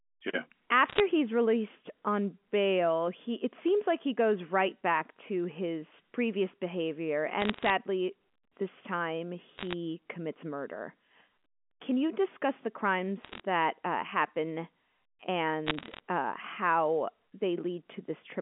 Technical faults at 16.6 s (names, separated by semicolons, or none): none